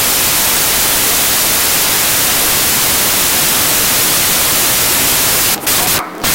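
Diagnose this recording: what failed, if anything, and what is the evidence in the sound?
The fault is a wrong sample width at the sample-format conversion stage, across the whole clip. Loud noise masks the original running 1.5 times fast and high, which fits 16-bit data read as packed 24-bit. A sample-rate mismatch alone would shift speed without noise; a byte-order error keeps speed.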